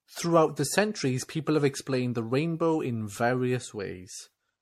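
From start to finish the speech sounds swirly, hollow and smeared, with consonant attacks blurred and a watery, phasey texture, and nothing is present above 16.4 kHz. This is generation loss, likely from decoding and re-encoding the audio roughly seven times, in a way that fits MP3 at about 64 kbit/s. Each pass quantised the signal again on a shifted frame grid, so the noise and spectral holes piled up beyond what one encode would leave.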